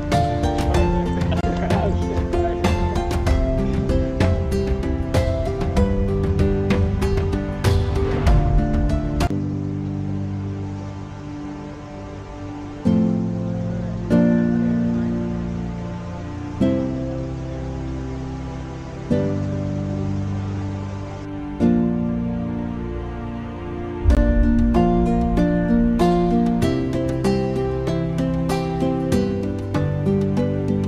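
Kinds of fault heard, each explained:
Bluetooth stall: The sound drops to silence twice and then carries on. The first gap runs from 1.41 to 1.43 s and lasts 24 ms. The second, at 24.15 s, lasts 18 ms. Both are abrupt cuts to nothing rather than fades. The likely cause is interference on the wireless link holding up packets. The headphones' buffer runs dry, so playback halts briefly. It resumes as soon as the delayed audio arrives.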